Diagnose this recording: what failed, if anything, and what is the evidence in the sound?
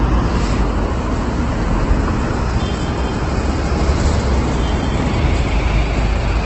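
Opus compression runs throughout. The band stops near 8.2 kHz, and tonal parts come out rough and grainy rather than swirling, with gaps filled by noise instead of left as holes. That points to the codec stage, likely an Opus encoder in its music (CELT) mode squeezed to a wideband setting, which fits a bitrate around 12 kbps. Band energies are kept, but the fine detail is replaced by folded or synthetic noise, so the damage is heavy.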